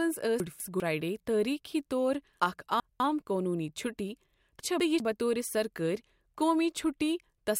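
A 200 ms chunk was delivered one slot late at 0.4–0.8 s, before "تٲریٖخی طور". At 2.4–3.0 s, between "تٲریٖخی طور" and "قونوٗنی چُھٹی", one was delivered two slots late. At 4.6–5.0 s, after "قونوٗنی چُھٹی", another was one slot late. These chunks out of order leave the speech scrambled.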